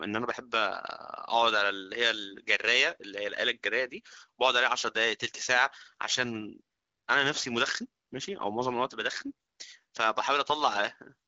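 No faults are audible in the speech; its lightly coded, band-limited character fits the AMR wideband (HD Voice) codec at around 15.85 kbit/s, a rate high enough to stay clear of the rough, raspy texture of the lower modes.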